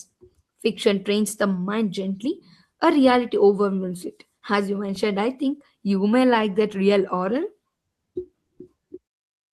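Throughout the speech, there is clock drift between sender and receiver: the sending clock runs slow by roughly one and a half percent, so audio arrives a little more slowly than the receiver plays it out. The receiver's buffer keeps draining, which produces small timing hiccups at uneven intervals across the whole clip. Random network jitter causes irregular stalls that push in either direction, whereas every disturbance here leans the same way, toward stretching.

From 0.90 s to 7.71 s, the receiver makes repeated timing corrections to keep up with the slow sender, repeating short slices of audio so the buffer does not run dry. Over that stretch the sound plays at about 99% speed and gains roughly a tenth of a second in total. The result is a faintly unsteady, dragging tempo with slight stutters. Packet loss concealment fills holes left by missing data, but these repeats are small, unevenly spaced, and all add time.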